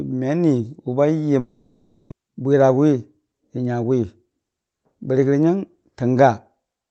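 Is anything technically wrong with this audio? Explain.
Yes, there are two faults.

From 1.39 to 2.12 s there is a long network dropout. The sound smears into a fading buzz for the whole gap and never goes fully silent. Audio likely stopped arriving. When it resumes, about half a second is simply gone.

From 2.20 to 4.39 s comes a jitter buffer speed-up. The receiver had built up around a fifth of a second of extra delay. It trimmed tiny pitch-period slices repeatedly, so the speech runs about 9% fast and sounds hurried at unchanged pitch.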